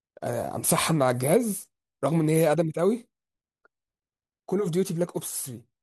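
No technical faults can be heard anywhere in this speech recording.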